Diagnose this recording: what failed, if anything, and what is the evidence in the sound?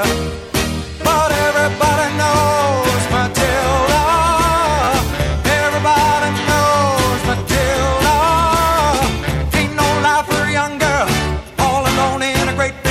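The playback driver missed its deadline twice and replayed the last block, a repeated buffer fault. At 1.65 s a single extra play gives a click. From 4.84 to 4.88 s four repeats cycle at the block rate into a brief buzz, with hard joins fitting a 10 ms buffer.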